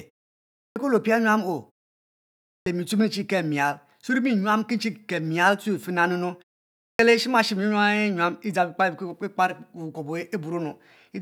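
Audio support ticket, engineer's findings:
Clipped start after a pause: output device sleeps during silence and is slow to wake/relock, so the first 0.34 to 0.37 s after each gap is dropped. Speech resumes abruptly, missing onsets. 0.40–0.76 s after a 0.38 s pause, cut just before "kue le opia nyuam"; 2.29–2.66 s after a 0.66 s pause; 6.65–6.99 s after a 0.30 s pause.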